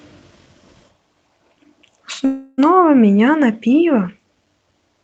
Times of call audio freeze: 2.25-2.60

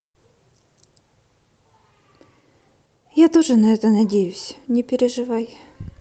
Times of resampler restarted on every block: none

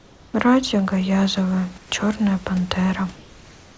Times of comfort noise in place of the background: 0.00-0.34, 1.78-1.92

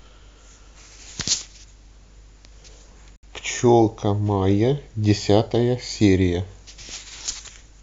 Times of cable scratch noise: none

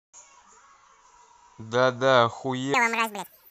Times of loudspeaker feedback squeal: none

